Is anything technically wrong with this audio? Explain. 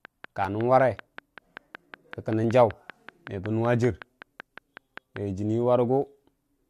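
Yes, there are two separate problems.

From 0.05 s to about 5.2 s there's a train of clicks, steady at about 5.25 per second, roughly thirty in all, peaking a bit above the speech. Something's injecting a repeated pulse, likely interference from nearby gear or a faulty connection, so you hear regular ticking right over the talking and through the gaps.

At 0.45 s and again at 2.44 s there's an overlap between stream segments, spaced two seconds apart, matching the segment length. Their time stamps overlap, so the player trims a sliver of sound that wasn't actually duplicated, and the waveform jumps. Each one comes across as a tiny click or skip.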